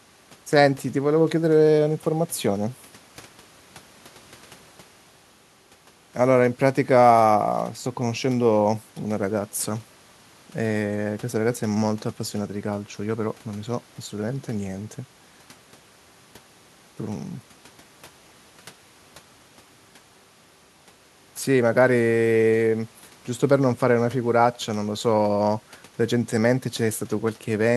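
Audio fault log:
Nothing to log here: the speech in this clip comes through without any technical trouble worth noting.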